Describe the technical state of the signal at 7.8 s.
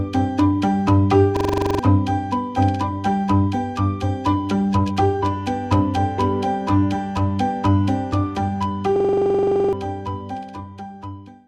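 At 7.8 s the signal is intact, with no audible fault at that moment.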